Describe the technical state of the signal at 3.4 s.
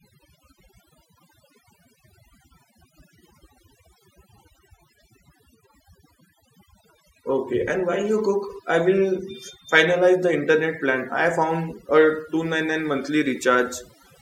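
At 3.4 s, as throughout the clip, overdone noise removal gates frequency bands near the noise estimate, leaving near-silent, twinkling gaps and stripping away quiet parts of the voice.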